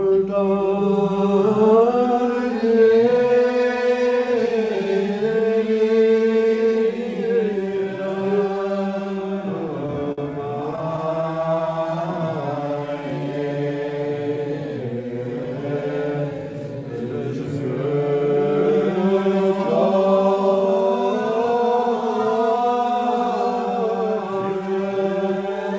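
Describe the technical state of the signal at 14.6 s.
At 14.6 s the audio is intact, with no dropout, glitch or distortion, only the steady band limit of the call path, whose G.722-style coding leaves nothing above 8 kHz.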